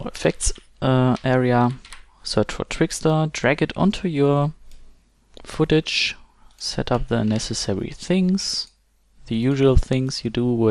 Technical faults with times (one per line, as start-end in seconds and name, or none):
0.00-10.71 MP2 compression